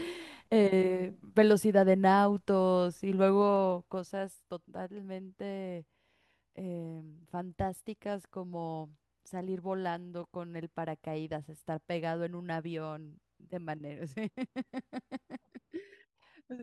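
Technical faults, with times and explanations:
3.35–4.40 s zipper noise: the speech level falls roughly 10 dB in unsmoothed steps of about 2 dB, around seven a second, each one clicking.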